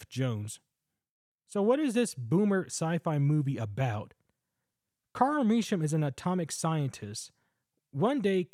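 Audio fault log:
Nothing stood out on listening to this speech recording.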